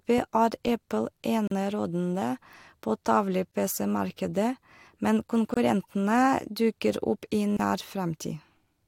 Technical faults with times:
1.47-1.51 gap at a join of encoded pieces
3.51-3.54 gap at a join of encoded pieces
5.54-5.57 gap at a join of encoded pieces
7.57-7.59 gap at a join of encoded pieces

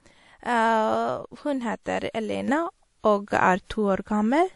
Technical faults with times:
0.00-4.55 transcoding between lossy codecs
2.48-4.55 sudden gain jump

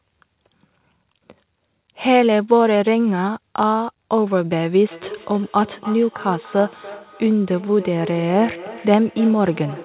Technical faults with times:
4.91-9.85 feedback echo between two devices

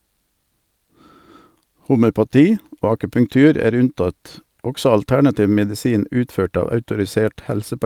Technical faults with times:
none

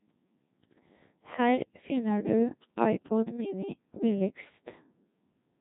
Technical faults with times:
0.00-5.61 Codec 2 vocoder

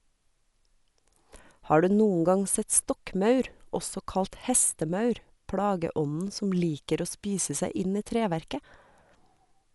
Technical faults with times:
0.00-9.74 Dolby Digital compression

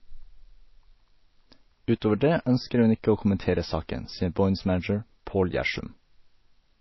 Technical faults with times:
0.00-6.81 MP3 compression

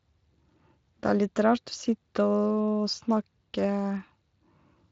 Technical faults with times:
none

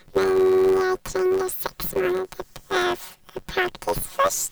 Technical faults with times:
0.00-4.51 planar audio read as interleaved

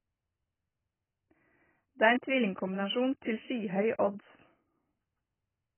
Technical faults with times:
0.00-5.78 AAC compression

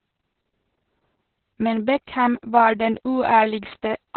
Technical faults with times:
0.00-4.16 Opus voice compression

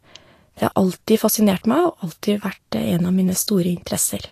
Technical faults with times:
0.00-4.32 Vorbis compression

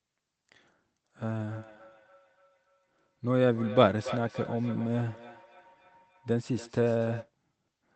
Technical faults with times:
1.51-7.33 feedback echo between two devices

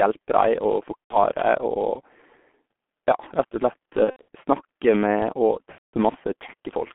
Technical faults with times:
0.00-6.95 G.723.1 codec
0.99-1.18 VoIP packet loss concealed by the speech codec
4.05-4.24 VoIP packet loss concealed by the speech codec
5.72-5.94 VoIP packet loss concealed by the speech codec

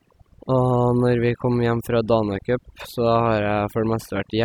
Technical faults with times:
0.00-4.44 overdone noise removal

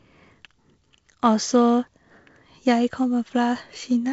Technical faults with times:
none

